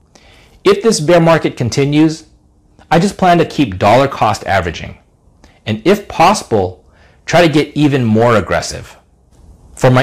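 Hard clipping runs through the whole speech clip. The signal was driven about 12 dB past what a stage could pass, so roughly one sample in twenty was cut flat. The flattened peaks add high harmonics, heard as distortion on the louder moments.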